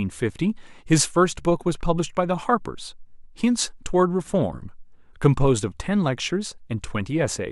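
No audible faults in this speech.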